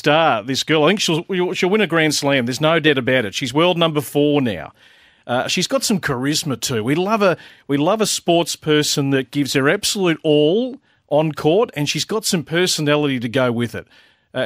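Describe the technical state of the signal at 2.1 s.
At 2.1 s the signal is intact, with no audible fault at that moment.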